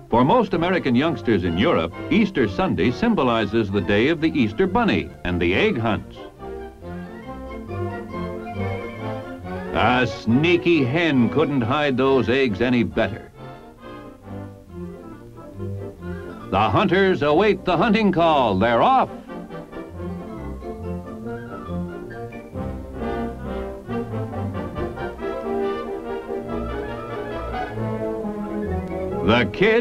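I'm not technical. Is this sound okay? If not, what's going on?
No, there's one small glitch. At about 5.14 s you'll hear a quick tick. That's a block of digital silence: for roughly 3 milliseconds the sound drops to silence and then snaps back, with no fading in or out. Those abrupt edges are what make the click. It's so short it comes across as a tick rather than a gap, and its length fits a 128-sample buffer that the playback or recording program didn't fill in time.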